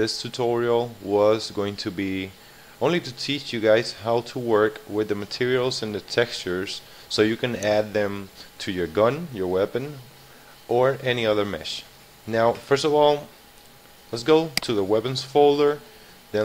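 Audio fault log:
No faults can be heard anywhere in this audio.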